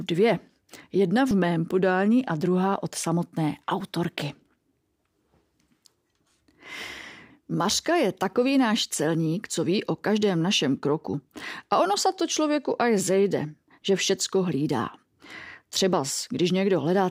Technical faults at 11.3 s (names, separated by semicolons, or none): audio missing between chunks